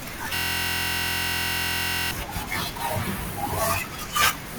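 From about 0.35 s to 2.11 s the speech is replaced by a system hang loop. The machine or driver stalled while the sound hardware kept replaying the same ring buffer, so a single 23.22 ms slice of audio repeats roughly 76 times. That loop length fits a 1024-sample buffer. Because the slice is so short, you hear a steady buzz at 43.1 Hz instead of a stutter, and then the speech picks up again.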